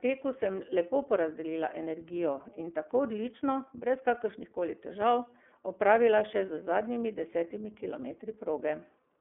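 The iLBC codec colours the speech from start to finish. The audio sits in a telephone band of roughly 250 Hz to 3.4 kHz, and nothing above 3.6 kHz passes, so sibilants lose their edge and the sound is boxy. Each frame's excitation is coded on its own, consistent with 30 ms frames and the 13.33 kbps mode. The codec damage is plainly audible as a rough, slightly synthetic texture.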